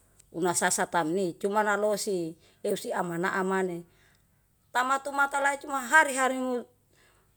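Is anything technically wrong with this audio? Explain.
No, nothing technically wrong can be heard in this speech recording. No part of it points to a problem in how the sound was captured, processed or delivered.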